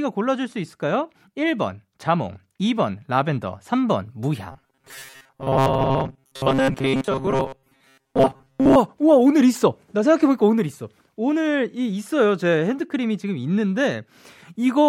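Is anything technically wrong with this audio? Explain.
Yes. From 4.52 to 8.76 s there is robotic sound from repeated short buffers, likely because new audio arrived too seldom. Most of that stretch is filled by looping a short slice, which fits a buffer of roughly 7.5 ms, and the speech becomes a rigid, metallic 134 Hz buzz.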